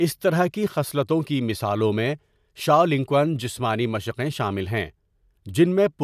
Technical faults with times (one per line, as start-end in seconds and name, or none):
none